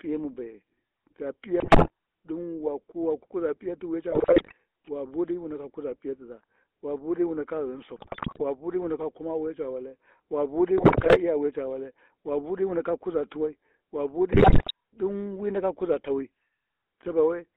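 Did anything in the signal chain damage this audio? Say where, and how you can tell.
Yes, at the codec stage. Across the whole clip the speech has the buzzy, gravelly roughness of the GSM full-rate codec, and it's plainly audible. The band runs from about 250 Hz to 3.5 kHz, so there's no air up top and no weight underneath. That codec models the vocal tract and drives it with a sparse, regularly spaced pulse train. Throwing away most of the excitation like that is what leaves the grainy buzz, and the sound fits a 13 kbps full-rate stream.

On top of that, the radio link corrupted the bitstream, so there are GSM bit errors in five bursts: 1.6 to 1.9 s, 4.12 to 4.53 s, 7.96 to 8.43 s, 10.78 to 11.18 s, and 14.32 to 14.71 s. In each one the speech breaks into squawks, pops and a gargling smear. Flipped bits in the filter, pitch or gain parameters warp the spectrum or spike the level frame after frame while the burst lasts. 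The last burst has roughly double the error rate of the others.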